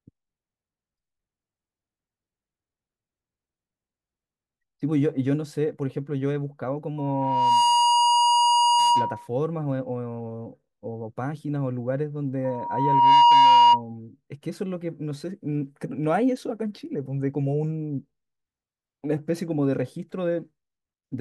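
Speech with loudspeaker feedback squeal at 6.98–9.28 s and 12.44–13.82 s: a 954 Hz tone swells over under a second, well above the voice, as the mic-speaker loop runs away.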